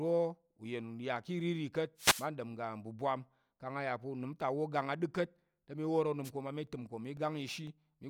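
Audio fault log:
1.97–2.28 s and 6.24–6.30 s, wireless microphone noise hit: The analogue FM radio link fades as reflected signals cancel the direct one, and the receiver's own noise rises to fill the gap. Each fade is heard as a burst of static. The first lasts about a third of a second. The second, just after "te mi wor", is a brief swish of about 60 ms.
6.67–7.67 s, periodic USB or driver dropouts: Something holds up the USB bus or audio driver every 0.5 s, and each time roughly a millisecond of audio never arrives and is replaced by silence. The gaps fall at the same spacing, so they come through as a few evenly spaced ticks, about three across this second of audio.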